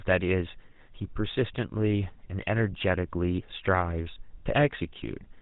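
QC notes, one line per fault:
Throughout: GSM full-rate codec, plainly audible; band stops at 4 kHz and pulse-train excitation gives speech a buzzy, gravelly roughness, consistent with 13 kbps coding.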